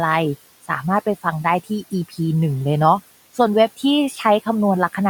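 The noise suppressor mistook speech for background and turned it down, cutting the speech at 2.09 to 2.19 s by about 13 dB and at 4.10 to 4.19 s by about 7 dB, so those moments sound swallowed and faint.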